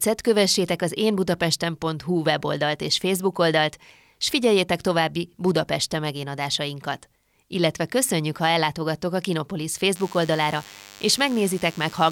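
A speech recording with DECT cordless phone buzz from 9.95 s to the end: a thin, harmonic-rich 100 Hz rasp well below the speech, from a nearby DECT phone's 10 ms radio bursts being rectified, unlike smoother mains hum.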